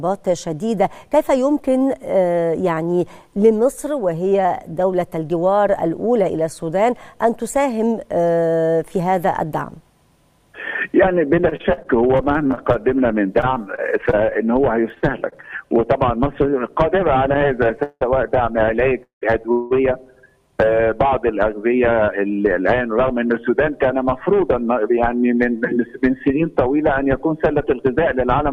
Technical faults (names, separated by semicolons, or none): repeated packet loss (robotic sound); repeated stalls (stutter)